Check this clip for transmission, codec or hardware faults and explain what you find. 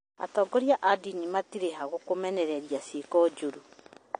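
Two faults are audible: codec damage across the whole recording, and a burst of clicks near the end.

Throughout the speech, the sound is dull and smeared, with a watery, fizzy texture on sibilants and nothing above 9.6 kHz. This is likely AAC compression. The AAC-LC encoder, starved of bits, discards the top band and quantises the remaining spectrum coarsely, leaving gaps that shimmer from frame to frame. The damage is plainly audible and fits a bitrate around 32 kbps.

From 3.05 to 3.98 s, a train of clicks ticks over the speech. There are about ten similar pops at roughly 10.9 per second, spaced unevenly, and the loudest reach about the level of the speech itself. The likely cause is an outside source injecting repeated pulses into the signal path, such as interference from nearby equipment or a faulty connection or power supply. The irregular spacing points away from any steady timing process.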